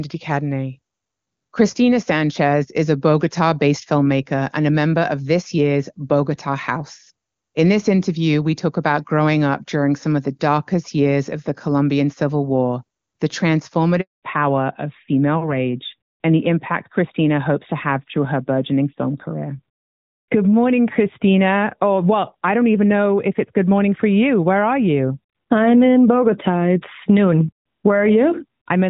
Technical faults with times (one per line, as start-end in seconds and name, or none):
14.01-14.23 handover gap
14.23-28.90 fallback to narrowband